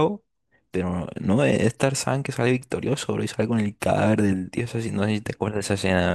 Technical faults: none

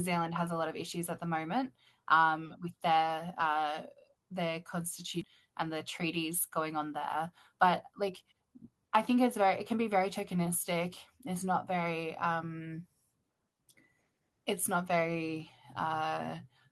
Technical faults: skip ahead; jitter buffer speed-up

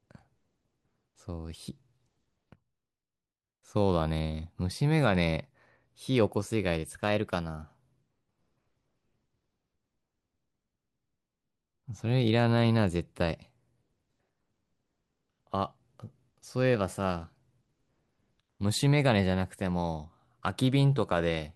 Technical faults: drift correction step

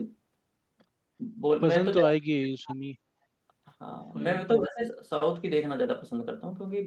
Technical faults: speech suppressed in double talk

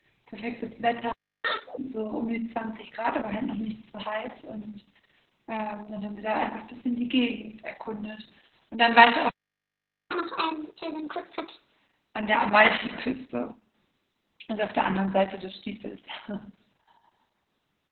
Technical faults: Opus voice compression; playback stall; catch-up at higher speed

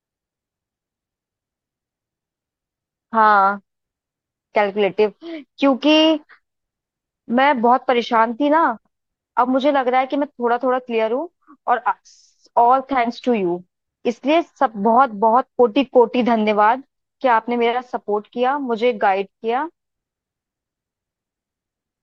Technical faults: none

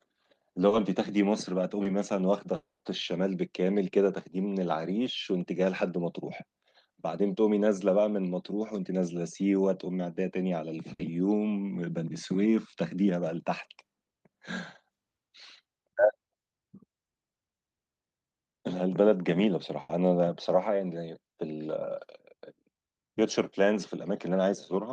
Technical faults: short concealed packet loss; long network dropout; burst of packet loss

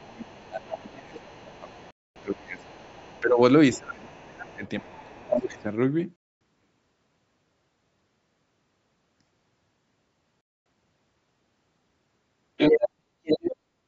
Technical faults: other side's voice leaking through; speech suppressed in double talk; gap between chunks; background gated by the echo canceller

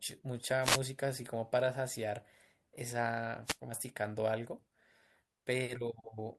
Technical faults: wireless microphone noise hit; stream segment skipped

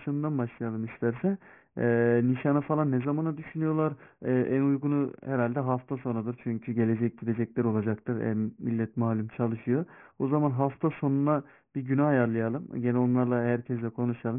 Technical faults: aliasing

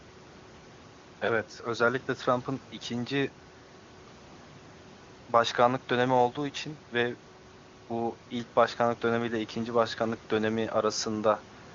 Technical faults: none

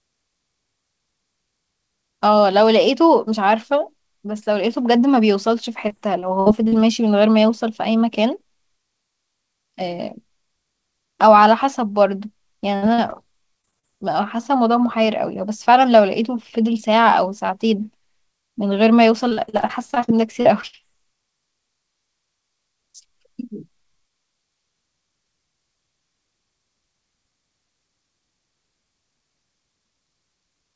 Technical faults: repeated packet loss (robotic sound); burst of packet loss; short concealed packet loss

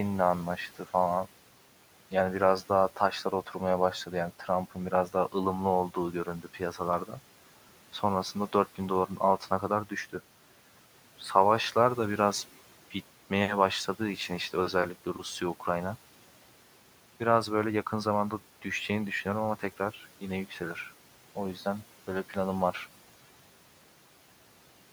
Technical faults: speech cut by the noise suppressor

